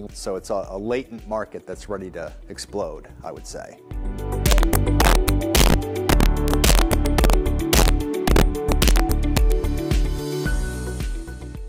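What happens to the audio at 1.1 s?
Nothing goes wrong at 1.1 s; the audio plays through that moment intact, with no dropout, click or other fault.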